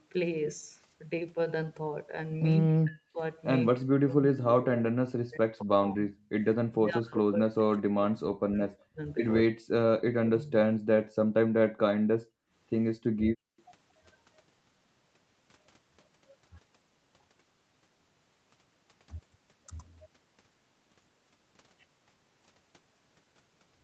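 Speech, and the talker keeps getting pulled down hard, by around 40 dB at worst, over 2.68–3.21 s, 3.77–6.1 s, 6.74–10.52 s and briefly at 12.08–12.13 s, likely speech suppressed in double talk as the echo canceller clamps down while the far side talks. The room sound also dips, about 37 dB at 11.69–11.8 s and about 33 dB across 12.41–13.57 s, which is background gated by the echo canceller while the loudspeaker plays. Right after, at 13.58–13.62 s, there's a tiny, very faint scrap of the voice repeated 226 ms late, likely an echo leak where the canceller missed a bit of loudspeaker pickup.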